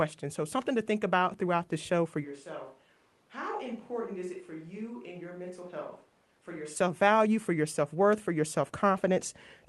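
From 2.25 to 6.75 s, after "throughout the show for", the speech suddenly turns hollow, roomy and about 10 dB quieter, likely a switch to a distant microphone. The added room noise sets it apart from a simple level drop.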